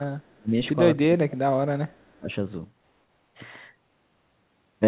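Speech carried over a narrowband call path with nothing above 4 kHz, consistent with G.711 mu-law at 64 kbps, shows two kinds of fault. An echo leak appears at 0.20–0.36 s and 1.91–2.04 s: a very faint copy of the far-end speech, about 40 dB down, trails it by 336 ms, likely because a loudspeaker-side echo canceller let residual pickup through. Speech suppressed in double talk shows as deep dips of roughly 25 to 30 dB at 0.37–0.55 s, 1.01–1.56 s and 2.08–2.30 s. These dips match the canceller, facing overlapping talk it could not separate from echo, attenuating the local talker along with it.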